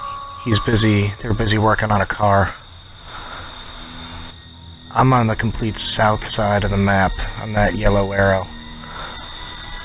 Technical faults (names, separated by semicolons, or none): none